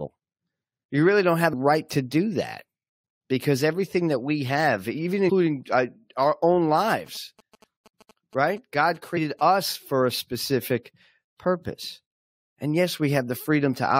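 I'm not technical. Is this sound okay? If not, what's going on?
No. Two separate problems can be heard.

Compressed frames skipped, at 1.52 s, at 5.28 to 5.30 s and at 9.16 s. The recording is stored in small chunks, each about 23 ms long. At these moments several chunks are simply missing, about seven at the first two spots and about five at the third, so the speech jumps forward by a small fraction of a second.

GSM signalling bursts, from 6.68 to 9.41 s. An older-style mobile phone nearby was briefly talking to its network, sending short groups of radio pulses. The audio equipment picked those up and turned them into sound: a galloping dit-dit-dit of short buzzes, each a low hum vibrating 217 times per second, sitting quietly beneath the speech. The last skipped-chunk jump at 9.16 s falls inside this stretch.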